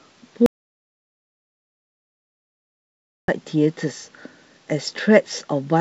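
An audio dropout to silence runs from 0.46 s to 3.28 s in this speech clip, blanking about 2.8 s of the talker mid-flow into silence with no room tone underneath. The input was likely lost, through a disconnected source or failed link, while the recorder kept writing silence. The surrounding wideband telephone sound, consistent with G.722 coding, carries only faint coding texture.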